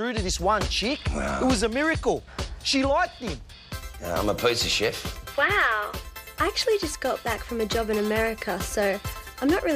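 Nothing in the audio stood out as a technical problem on listening.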